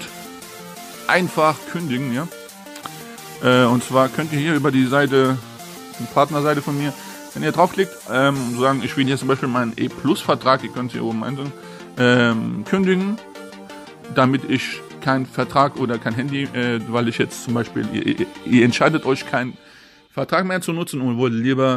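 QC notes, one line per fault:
No fault found, so there are no QC notes to log.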